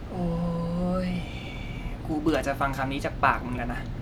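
No technical faults can be heard in this recording.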